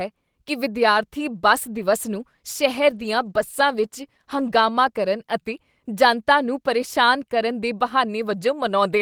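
A call bitrate drop runs from 1.52 s to 5.41 s in this speech clip, with the worst stretch lasting about 3.0 s. The sound turns rougher and watery because the call's bandwidth estimate fell and the encoder was told to spend far fewer bits, so it quantised the audio more coarsely. The change in quality fits a drop from about 32 kbps to 18 kbps, and the sound clears once the bitrate climbs back.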